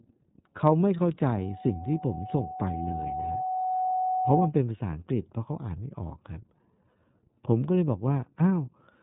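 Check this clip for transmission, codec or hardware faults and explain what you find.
Two faults are audible: codec coloration across the whole recording and a feedback squeal near the start.

Throughout, the speech shows iLBC codec damage. Each 30 ms frame's excitation is coded independently, giving a rough, synthetic texture, consistent with 13.33 kbps. Nothing above 3.8 kHz survives.

From 1.33 to 4.53 s, a loudspeaker feedback squeal appears at 746 Hz. The microphone re-amplifies its own loudspeaker, so the tone swells over roughly three seconds and ends a few dB above the speech.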